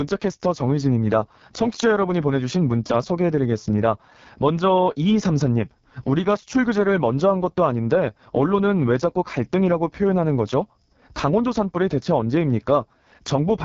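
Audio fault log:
Throughout, AMR wideband (HD Voice) codec: speech is rough and raspy with a buzzy, noisy texture, which fits the lowest mode at about 6.6 kbit/s, too few bits for the vocal tract model. Nothing remains above 7.4 kHz.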